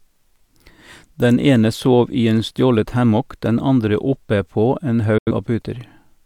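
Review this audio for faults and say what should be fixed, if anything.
At 5.18 s the speech cuts out in a digital broadcast dropout and returns at 5.31 s. The receiver muted after failing to decode good frames, and the silence and quick fade point to roughly two frames of audio, about 85 ms, being discarded. On the waveform the signal drops to a flat line through a very short fade of about 3 ms, and the spectrogram shows a clean vertical gap across all frequencies. Stronger error protection or better reception margin at the receiver would prevent these frame losses.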